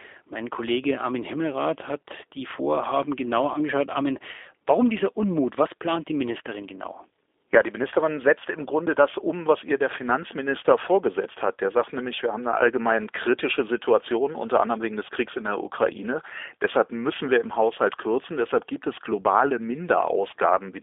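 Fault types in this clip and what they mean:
G.729 codec: The speech is rebuilt by a low-rate voice codec, and the damage is plainly audible throughout. It works from a vocal tract filter, a pitch predictor and a few pulses per short frame. The sound is confined to about 300 Hz to 3.6 kHz, so it is thin and lacks both depth and sibilant detail. Voiced parts sound slightly rough and synthetic. All of this fits an 8 kbit/s G.729A line.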